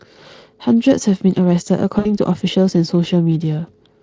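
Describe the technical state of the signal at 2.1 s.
At 2.1 s, VoIP packet loss concealed by the speech codec: about 60 ms of packets went missing (1.99–2.13 s), so the decoder extrapolated, stretching speech into a buzzy tone or coloured noise that fades.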